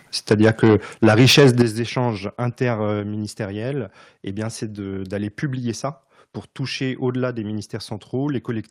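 Microphone overload runs from 1.03 to 1.62 s: the speech peaks land at the converter's ceiling and their tops are sheared flat, around a tenth of the samples, giving a harsh, crackling edge. The input was likely driven about 8 dB too hot.

Microphone volume stepped down at 1.62 s, right as the distortion ends: voice and background both fall suddenly by about 10 dB in a single jump, most likely the call software cutting the device's input volume after detecting the clipping.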